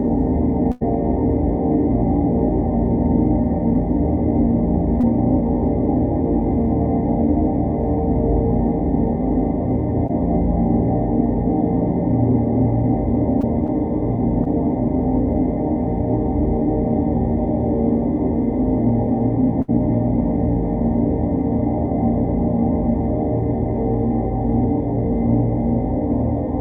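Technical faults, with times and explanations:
0.71–0.83 s and 19.62–19.70 s, burst of packet loss: about 100 ms and then 60 ms of audio never arrived. The receiver stretched the last sound and faded it, giving a held buzz or dying hiss before the audio jumps ahead. On a spectrogram this shows as frozen, smeared frames dimming out, then an abrupt restart. The waveform shows the continued sound shrinking in amplitude.
5.01–5.05 s, 10.07–10.11 s, 13.41–13.45 s and 14.44–14.48 s, short concealed packet loss: each time about 20 ms went missing. The decoder filled it by continuing the preceding sound and blending back, heard as a brief smear or wobble. On the waveform there is a short run of continued sound. The spectrogram shows a narrow blurred column within the Opus call path's band, which stops near 12 kHz.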